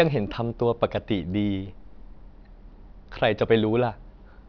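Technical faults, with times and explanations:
Throughout, aliasing: sibilants turn gritty as content above 5.5 kHz folds back down, which points to downsampling to 11 kHz without a low-pass filter.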